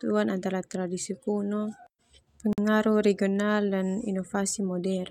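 At 2.53 s the speech drops out for about 49 ms, with smeared edges, then resumes where it stopped. This is a gap at a join of encoded pieces: separately encoded segments, joined about every 6 s, kept their encoder delay and final-frame padding.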